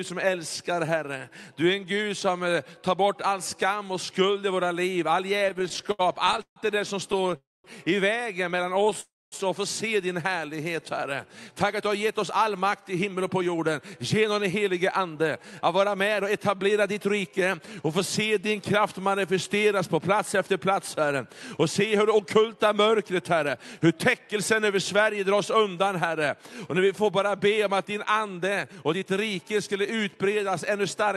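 From 5.39 to 6.58 s the audio shows repeated stalls (stutter): sixteen brief holds, the longest 141 ms, stretch about 29% of that span with extended copies of the preceding sound. Packets were arriving late, so the jitter buffer kept emptying and the receiver padded each wait. Shorter bursts follow at 7.12 to 7.35 s and 8.71 to 8.95 s, five gaps each, none over 14 ms. Nothing is lost, but the sound drags in a choppy way.

What sets the call audio freeze apart is one longer hold rather than many small ones. At 7.37 to 7.66 s the last sound is carried on for 273 ms and fades into about 220 ms of silence. At 9.00 to 9.34 s the hold is 316 ms with about 230 ms silent. The likely cause is packets held up long enough to drain the buffer. Playback then resumes exactly where it stopped, inserting a pause without skipping anything.

Two jitter buffer speed-up passes follow, at 11.29 to 17.60 s running at 108% and at 28.28 to 29.03 s at 110%. 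After a backlog built up, the receiver cut out tiny pitch-period slices, about half a second in total in the first pass and about a tenth in the second. The sound hurries, yet the pitch stays put, unlike a resampling error. Through the Opus call path at roughly 64 kbps the top stops near 12 kHz.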